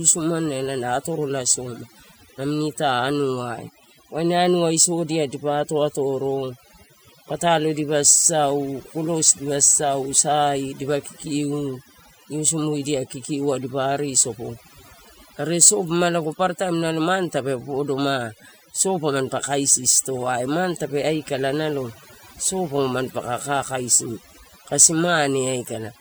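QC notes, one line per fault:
Throughout: overdone noise removal. The noise reduction was pushed too hard, so individual frequency bands sitting near the estimated noise level are pulled far down or switched off. The background drops and breaks up into twinkling specks, and quieter parts of the speech vanish with it.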